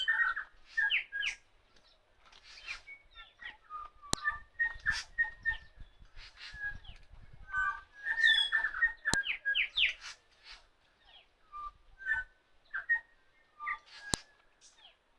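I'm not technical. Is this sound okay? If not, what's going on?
No. The audio was stitched from separate pieces, and each piece's file header was left in and played as sound: file header played as audio. That gives a sharp, loud click at 4.13, 9.14 and 14.14 seconds, repeating every 5 seconds.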